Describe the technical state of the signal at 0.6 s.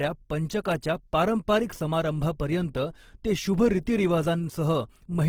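Right around 0.64 s there's a pre-echo, a short hiss of about 15 ms sitting just ahead of a sharp attack. The codec spreads its quantisation noise across the whole transform block, so noise meant for the loud onset leaks into the quiet moment before it and softens the attack.

Underneath that, the whole speech clip carries plainly audible codec damage, likely Opus compression in its music mode at a low rate, something like 16 kbps. The band stays full, up to about 20.2 kHz, but tones come out grainy and rough rather than clean.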